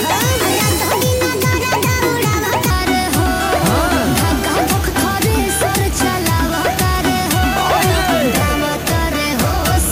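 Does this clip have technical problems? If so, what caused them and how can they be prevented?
Yes. A section at the wrong speed, likely from an editor or player fitting it to the wrong clock, runs 1.29 times too fast from 0.0 to 2.70 s, raising pitch about four semitones. Prevent it by confirming sample-rate and clock settings match across every editing and playback stage.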